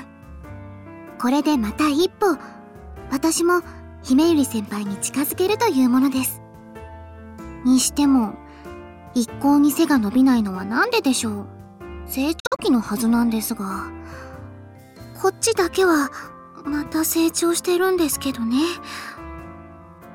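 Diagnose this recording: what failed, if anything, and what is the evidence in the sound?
Between 12.40 and 12.60 s the sound breaks into several short holes, about 116 ms missing in total over roughly 186 ms, the longest single gap 46 ms. The pattern points to a Bluetooth dropout, likely on the wireless link to the headphones: late packets were discarded and the output muted until good ones arrived. The sound resumes as if it had kept playing. On a waveform the gaps show as flat silent runs with near-vertical edges; a spectrogram shows full-band blank columns.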